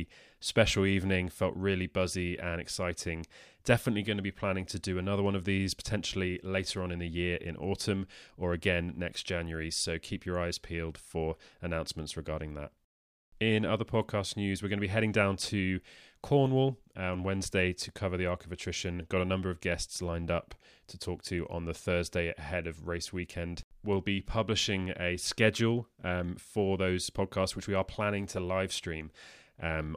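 There are no technical faults to describe, so there is nothing to place in time order.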